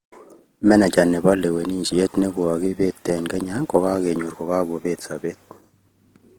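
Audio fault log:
Throughout, Opus compression damage is plainly audible in the speech. The spectrum still reaches about 20.2 kHz, so the sound isn't muffled. Instead it turns rough and grainy. When a low bitrate runs short of bits, the encoder keeps each band's energy but fills the detail by copying lower bands or adding noise. That produces texture rather than swirling holes. The character points to music mode, and likely to a rate around 16 kbps.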